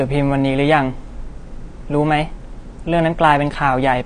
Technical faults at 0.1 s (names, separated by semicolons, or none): AAC compression